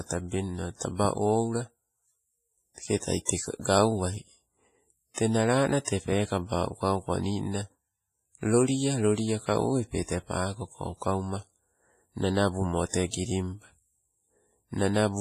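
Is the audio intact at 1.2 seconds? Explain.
No. At 1.2 seconds the speech sounds ringing and washy, with a hiss that breathes along with it and nothing above 15.5 kHz, as through the whole clip. The likely cause is heavy WMA compression: its long transform blocks smear quantisation noise across tens of milliseconds, in a way that fits a bitrate around 24 kbps.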